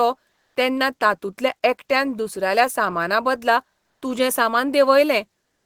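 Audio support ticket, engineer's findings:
Comfort noise in place of the background, 0.33–0.55 s (before "तेन्ना तातूंतल्या एकट्यान दुसऱ्याल्या") and 3.81–4.01 s (after "तातूंतल्या एकट्यान दुसऱ्याल्या सामानाबदला"). Faint room tone becomes steady, featureless hiss, about 3 dB and 2 dB level shift. Likely Opus DTX at the sender. Noise continues, unlike gating or a dropout, which leave silence.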